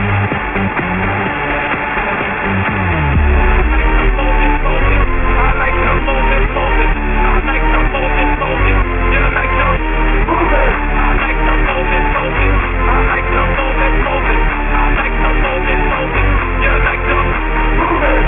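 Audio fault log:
Throughout: aliasing. Energy above 3 kHz folds back beneath it, pointing to a resample to a 6 kHz rate without anti-alias filtering. The folded tones sit about 10 dB under the signal and sound gritty and metallic. The spectrogram shows mirrored traces packed hard against a 3 kHz ceiling.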